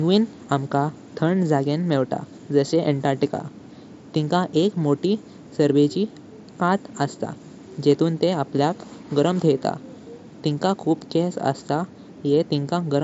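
Nothing in this speech goes wrong; it simply comes over a Bluetooth headset link using the mSBC codec, so the sound tops out at about 7.7 kHz and carries a faint graininess on the louder moments, just as that wideband headset path normally does.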